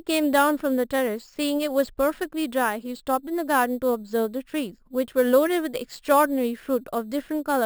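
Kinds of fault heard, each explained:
Imaging from sample-and-hold upsampling: The speech was brought up to a higher rate by holding each sample flat, with no smoothing filter. Mirror copies of the spectrum therefore sit above the original band for the whole clip. The lowest copy fills roughly 6 to 12 kHz, which fits an original rate near 12 kHz. It sits about 19 dB under the speech. It is heard as a bright, metallic fizz that rises and falls with the speech.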